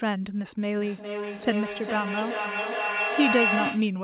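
From 0.8 s onward, a feedback howl: the microphone-to-loudspeaker loop gains level each trip, building a tone near 3 kHz as it repeats roughly every 0.4 s, peaking about 1 dB below the speech.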